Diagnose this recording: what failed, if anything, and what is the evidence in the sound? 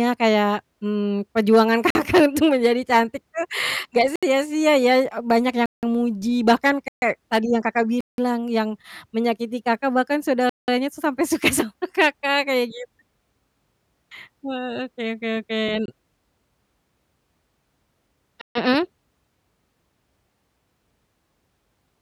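Abrupt holes at 1.90, 4.16, 5.66, 6.88, 8.01, 10.49, 15.86 and 18.41 s, lasting 25 to 186 ms: blocks of digital silence where the driver or buffer stage missed its deadlines. The first, after "kayak mmm perjuangan", fits a 2048-sample block.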